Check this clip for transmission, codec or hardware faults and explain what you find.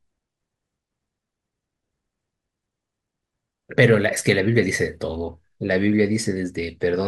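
Heard closely, the speech signal stays steady in level, continuity and timing, with nothing that points to a fault anywhere along the chain.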